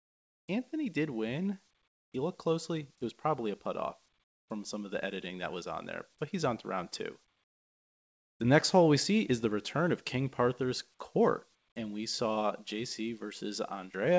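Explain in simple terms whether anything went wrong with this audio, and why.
In the quiet gaps of this speech, the natural room sound drops away and a flat, smooth hiss takes its place, noticeably quieter than the real background, from 0.00 to 0.48 s, 1.88 to 2.12 s, 4.24 to 4.48 s and 7.44 to 8.40 s. This is comfort noise in place of the background. The likely cause is that the sending side paused transmission whenever it detected no speech, and the receiving side filled each pause with a generic noise. The call audio itself, which carries nothing above 8 kHz, comes through the call codec as expected.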